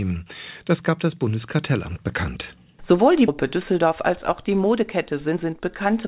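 At 3.28 to 3.30 s the sound lurches forward with no gap, and the two sides of the cut butt straight together. This is a skip ahead: about a second of audio was thrown away while later audio was already queued, so playback jumped to catch up.

From 4.49 s to 6.05 s the audio runs about 9 percent fast, sounding rushed though the pitch holds steady under the G.711 band limit of 4 kHz. This is a jitter buffer speed-up: with too much audio queued, the receiver snipped out many pitch-period-sized pieces, roughly 150 ms in all, to shrink the delay.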